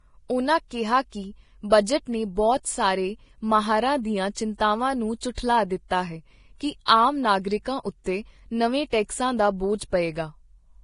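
Vorbis compression, likely the cause of what is heard throughout, leaves the speech hissy and grainy, with nothing above 10.6 kHz. The damage is heavy: treble detail is quantised so coarsely that it turns into noise, which fits a low bitrate near 30 kbps.

Pre-echo appears from 5.35 to 5.37 s. A sharp attack landed late in a transform block, so quantisation noise sized for the loud onset spread backwards into the quiet moment before it. The result is a short 29 ms hiss ahead of a softened, smeared attack.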